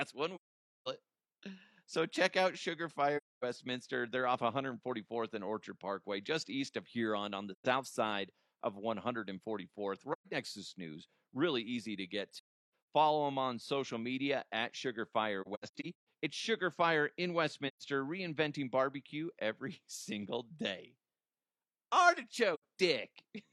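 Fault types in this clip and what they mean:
AAC frame loss with muting: lost AAC frames decoded as silence, the overlapping windows fading the speech out and back in, leaving soft-edged holes. Eight gaps, 85 ms to half a second, some scattered; waveform tapers to flat, spectrogram shows blank vertical bands.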